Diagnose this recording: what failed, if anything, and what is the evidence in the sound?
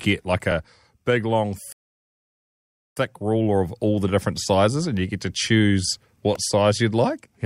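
A rebuffering stall at the network and playback stage. After "big long", the speech drops to silence at 1.72 s and resumes at 2.97 s with "ruler of all the". The player ran dry and waited for data. No speech is lost, but about 1.25 s of silence is added.

A repeated buffer at the driver or buffer stage. At 6.35 s, just after "you get to choose", a tiny click or buzz appears. A 1.45 ms piece plays three extra times with hard joins. This fits a 64-sample buffer being replayed while fresh audio was late.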